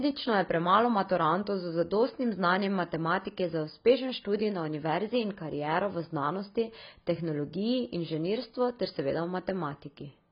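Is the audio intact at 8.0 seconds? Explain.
No. At 8.0 seconds the speech carries the same AAC compression damage heard throughout the clip. Nothing survives above 5 kHz, so it sounds dull and smeared, with fizzy sibilants. The coder likely ran at a very low bitrate, around 16 kbps, and discarded high bands.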